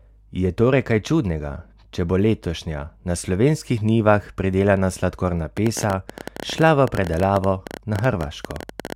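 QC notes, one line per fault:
5.57–8.93 s, train of clicks: beginning just after "slovenskih njivah pridelana sladkorna" and running almost to the end, a series of around fifty similar short pulses ticks over the speech at about 14.3 clicks per second, irregularly spaced. The peaks stand roughly 10 dB above the speech level, so they stay clearly audible and cut through the pauses too. The repeated, much-the-same shape points to a likely cause in external electrical interference or a faulty connection or power supply.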